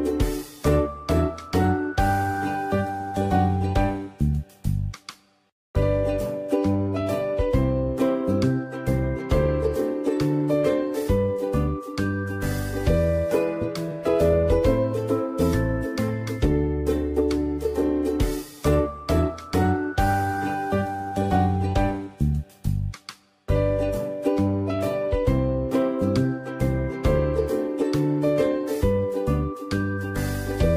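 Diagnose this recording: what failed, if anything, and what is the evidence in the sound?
The codec's the culprit: a corrupt frame decoded at about 16.08 s. There's a brief glitch, about one frame long, peaking around -25 dBFS. Flipped bits in that compressed frame got decoded anyway, putting energy at the wrong frequencies.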